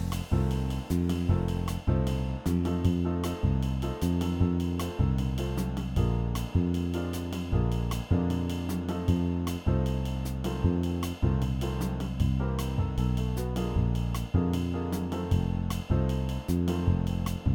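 Periodic clock jitter from 0.00 to 2.67 s: interference wobbles the converter clock at around 2 kHz, adding sidebands that give the sound a rough, metallic edge.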